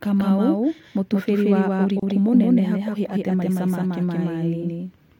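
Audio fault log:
Throughout: doubled audio track. A second full-band copy trails about 200 ms behind at roughly equal level, dry and uncoloured, likely a slower capture path mixed back in.
2.00–2.03 s: gap at a join of encoded pieces. A 29 ms silence opens mid-speech, then picks up where it stopped: untrimmed encoder delay and end padding at a splice.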